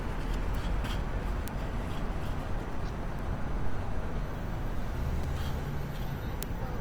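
The whole clip has a grainy, rough texture, with tonal parts turning noisy rather than swirly. That's likely Opus compression in its music mode, which fits a low rate around 24 kbps, with the band kept full up to about 20.2 kHz.

At 0.55 s and again at 1.48 s there's a bit error spike. A flipped bit throws one or two samples way off and back, so you get a single sharp, broadband tick that has nothing to do with the sound.

At 2.60 s comes a repeated buffer. Audio didn't arrive in time, so the same tiny chunk played twice more with hard joins. That fits a 5 ms buffer, and it comes out as a brief buzzy click rather than a stutter.

Another bit error spike ticks at 3.19 s. The repeated buffer buzz returns at 5.24 s, and one last spike lands at 6.43 s.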